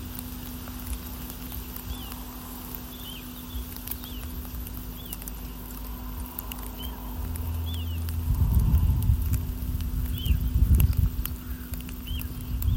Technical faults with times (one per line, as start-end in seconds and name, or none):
none